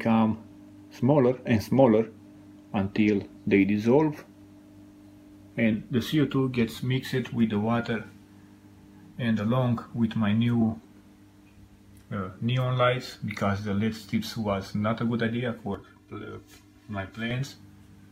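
Channel delay (comb filtering) turns the audio hollow and phasey from 15.75 to 17.31 s. One channel lags by around 3 ms, so the mono sum cancels evenly spaced frequencies, starting near 150 Hz. On a spectrogram these appear as fixed, regularly spaced dark horizontal stripes.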